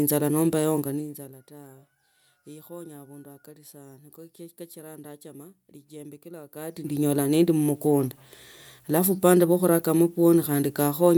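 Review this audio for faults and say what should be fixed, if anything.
Nothing in this audio needs to be fixed, as no faults can be heard.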